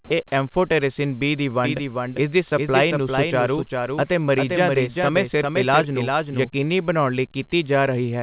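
From 1.65 to 6.51 s a doubled audio track runs: a full-band copy trails by roughly 0.4 s at about 5 dB down, likely from a second capture path. It starts and stops abruptly, with no decay, unlike an echo. At 2.50 to 2.52 s the speech drops out for a brief fill of steady comfort noise: the voice detector likely cut out. It is a noise patch, not a hard silence gap. Both sit within the call path's band limit at 4 kHz.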